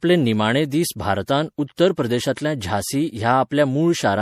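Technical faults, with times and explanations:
Throughout, generation loss: the speech sounds swirly, smeared and hollow, with softened consonant attacks. That's likely from repeated MP3 encoding, roughly three passes at what sounds like 64 kbit/s, each requantising on a shifted frame grid so the holes and noise stack up.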